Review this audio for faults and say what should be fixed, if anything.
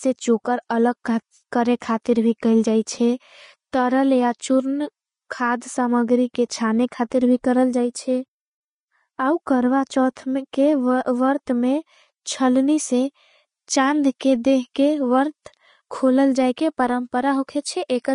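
Throughout, the speech has nothing above 10.5 kHz, which likely points to low-bitrate audio saved at a high bitrate: a roughly 32 kbit/s Vorbis source re-encoded as MP3. Go back to the original recording instead of this re-encode.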